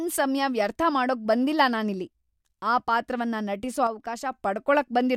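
From 3.87 to 4.33 s the speech suddenly sinks by about 6 dB, then snaps back. That's likely one channel dropping out: with one side of the stereo pair gone, the mono sum keeps only half the shared signal, and anything on that side alone vanishes.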